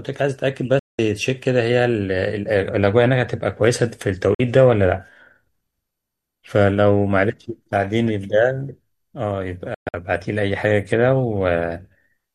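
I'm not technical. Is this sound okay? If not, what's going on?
No. The speech has three digital broadcast dropouts, where the receiver briefly lost the signal and went silent: 0.79 to 0.99 s, 4.34 to 4.40 s, and 9.74 to 9.94 s, the last broken into short holes. Unlike a crackle or stutter, the sound simply vanishes within a few milliseconds, and what was said during each gap is gone.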